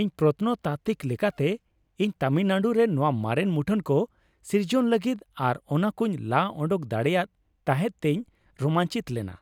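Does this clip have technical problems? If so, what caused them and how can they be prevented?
No, no technical faults here.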